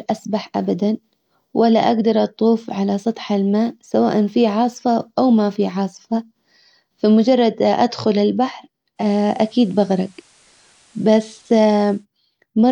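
Just after "فمجرد ادخل البحر", at 8.96 s, the digital radio blends to analogue FM over 137 ms: hiss appears roughly 35 dB down, and level shifts about 1 dB until 12.06 s. The steady hiss separates it from a codec change.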